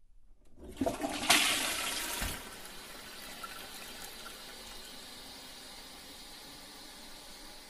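Until 2.0 s, an adaptive stream starting at a low bitrate has nothing above 12.1 kHz, then jumps to better quality with no rebuffering gap.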